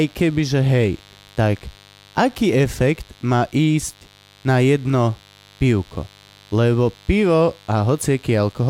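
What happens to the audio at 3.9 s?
At 3.9 s the speech carries mains buzz, which runs through the whole clip. Switching spikes from the 50 Hz supply leak in twice per cycle. Their harmonics stretch to several kHz. The result is a steady, raspy buzz sitting well below the speech.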